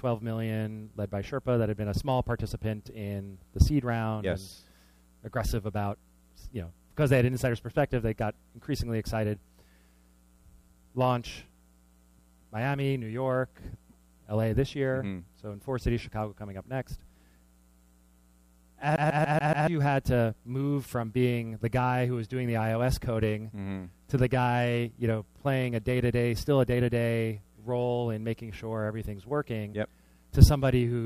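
A CD stuck on one turn interrupts the audio from 18.96 to 19.67 s. The same 0.14 s slice plays five times in a row, with a brief mute at each jump, because a scratch knocks the laser back one track at the same point on every rotation. What separates it from a network or buffer repeat is the fast, perfectly even stutter locked to a single disc revolution, with a gap marking every skip.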